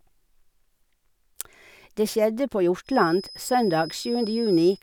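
From about 2.83 s to the end of the speech, a thin feedback whistle near 5.1 kHz sits well beneath the voice, likely a speaker-to-mic loop hovering at the edge of runaway.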